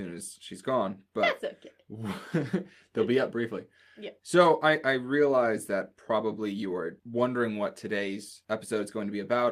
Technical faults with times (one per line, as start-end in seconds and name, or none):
none